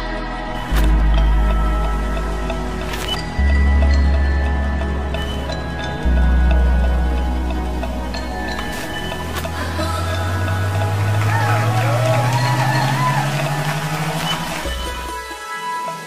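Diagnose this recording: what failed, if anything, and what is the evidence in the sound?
No stage between capture and playback leaves an audible mark on this audio, which arrives continuous and steady in level, with nothing in the signal pointing to a failure anywhere along the chain.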